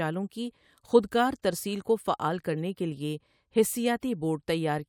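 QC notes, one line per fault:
2.53–2.55 s, corrupt frame decoded: a brief squeaky burst lasting a few frames, peaking around -25 dBFS, where damaged compressed data was decoded anyway and energy landed at wrong frequencies; unlike a click, the sound isn't a single spike.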